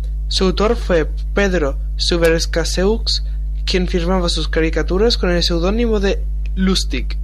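Mains hum sits under the speech the whole way through, a steady 50 Hz drone almost as loud as the talking, from power-line coupling through a ground loop or nearby transformer.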